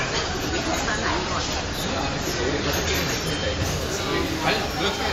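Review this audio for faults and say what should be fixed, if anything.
Adaptive stream starting at a low bitrate, 0.0 to 3.63 s: the player starts on a thin encode with nothing above 14.2 kHz and stronger codec artefacts, consistent with roughly 40 kbit/s MP3, then jumps to a fuller encode without a gap, fitting 128 kbit/s.

To prevent it, start playback on a higher-bitrate rendition or prefetch the better stream before output begins.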